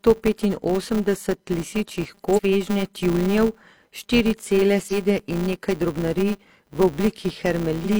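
It's a speech clip with a 200 Hz buzz running the whole way through, rising and falling with the speech level. That's the filter restarted on every block: each 5 ms block starts from silence and leaves a tiny tick.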